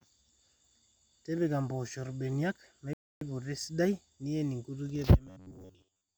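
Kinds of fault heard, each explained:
rebuffering stall: at 2.93 s the speech halts into 0.28 s of silence, then resumes exactly where it stopped, so nothing is skipped, unlike a dropout.
robotic sound from repeated short buffers: from 5.27 to 6.17 s speech becomes a rigid metallic buzz near 94 Hz, likely from looping roughly 11 ms chunks, with most real audio skipped.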